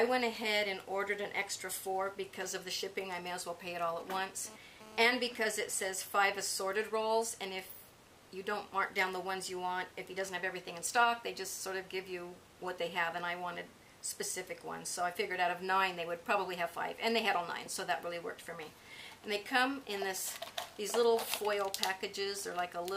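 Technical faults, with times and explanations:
4.00–5.06 s, GSM phone buzz: a hard, raspy buzz at about 217 Hz with dense harmonics sits about 17 dB below the audio. A nearby 2G handset's transmit bursts are being rectified in the audio circuitry, and this brief burst fits a data transfer rather than a call.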